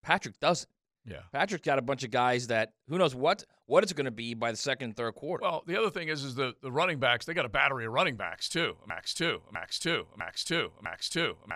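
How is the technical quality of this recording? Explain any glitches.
The recording has one clear glitch, a broken-record loop. From 8.9 s to the end, the same 0.65 s of speech repeats four times, exactly and back to back, likely because playback stalled on its last buffered fragment. Unlike echo, the repeats stay identical and don't fade.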